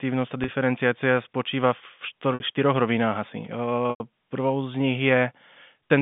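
Packet loss with pitch repetition hits at 0.44 s, 2.34 s and 3.9 s, leaving gaps of 40, 60 and 100 ms. The receiver loops the last pitch period to fill each hole, which gives a brief buzzy hold. The 100 ms gap fades toward silence before the speech cross-fades back in.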